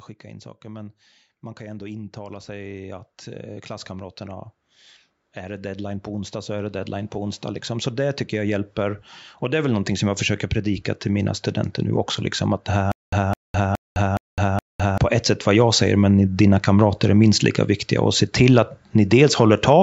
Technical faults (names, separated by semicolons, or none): automatic gain rising; stutter with silent gaps